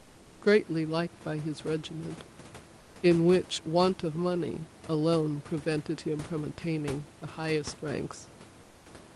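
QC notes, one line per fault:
8.63–8.85 s, comfort noise in place of the background: for about 220 ms the room hiss turns smooth and featureless, about 2 dB quieter, likely the codec's discontinuous transmission filling a pause.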